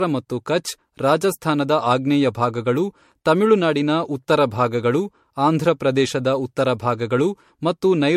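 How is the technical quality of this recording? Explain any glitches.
The quality is degraded throughout the 8 seconds by what sounds like generation loss: the speech has a swirly, hollow character with smeared consonant attacks and no content above 16.4 kHz. The likely cause is repeated lossy re-encoding, around five passes at low MP3-type bitrates in the region of 66 kbit/s. Each pass quantises again on a shifted frame grid, so the noise and spectral holes compound, leaving the sound more washed-out and warbly than a single encode at that rate would.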